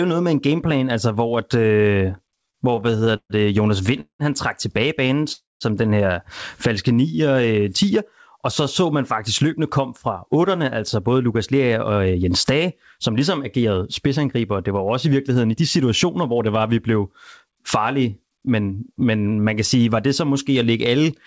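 From 2.18 to 4.22 s, right after "altså hvor at øh", the speech breaks into repeated stalls, a stutter. Packets kept arriving late, so the jitter buffer ran empty again and again. There are 18 small gaps. The receiver filled them with about 0.52 s of continued sound, a quarter of the span. The longest gap lasts 189 ms. Nothing is lost, but the speech drags and jerks until "han trak tilbage".

From 5.07 to 5.21 s there is a short stall from a late packet. One packet was not there when it was due. The receiver stretched the last sound by 16 ms, then went on from the same point. The delay grew by 16 ms. The result is a sound held slightly too long, with a faint buzz or dip.

From 5.32 to 5.64 s comes a call audio freeze. The last sound carries on as a fading buzz or hiss, then drops into about 190 ms of silence. In all, 281 ms is filled. The likely cause is packets held up in transit, which emptied the buffer. 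The speech resumes where it stopped, at "den her", now 281 ms later.

From 6.88 to 7.83 s a jitter buffer slow-down sets in. The buffer needed a reserve, so the receiver repeated single pitch periods and bits of pause many times in a row. This adds 114 ms, and the speech runs at 89% speed. The pitch stays the same. Sounds are drawn out.

From 9.45 to 16.65 s, after "så så man faktisk", a jitter buffer speed-up follows. The buffer held more audio than its target. The receiver cut short pieces of one or a few pitch periods, again and again. Roughly half a second is removed. The speech runs at 107% speed at unchanged pitch and sounds a little hurried until "at vi". Throughout, there is nothing above 8 kHz, which fits a wideband call codec such as G.722.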